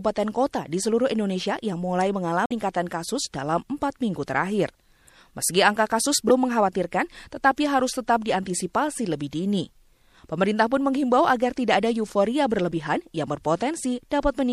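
A speech recording carrying plainly audible MP3 compression across its whole length: weak detail flickers in and out between frames, giving a watery, swirly texture with smeared consonant attacks, which fits a low bitrate of about 64 kbps as the likely cause. Damaged data in the compressed stream shows up three times. At 2.45 to 2.64 s, after "yang mulai" and before "kasus dalam empat minggu", there is a glitch. Shorter glitches follow at 6.27 to 6.31 s, after "angka kasus", and at 12.69 to 12.73 s, after "agar tidak ada euforia". At each point the decoder misreads the corrupted frames and resyncs at the next header.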